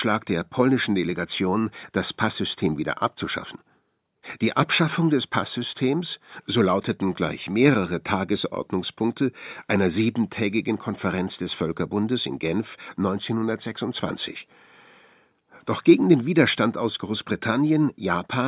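A speech recording with no audible technical faults.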